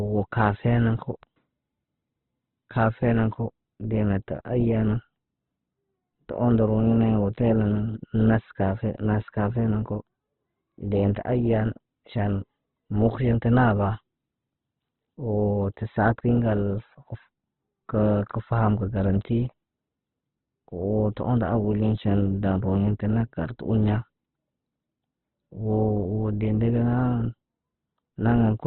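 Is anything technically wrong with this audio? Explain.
Yes. Throughout, the speech sounds grainy, rough and dull with nothing above 4.1 kHz, likely from Opus compression starved of bits, which fits about 12 kbps with noise-filled, narrowed bands.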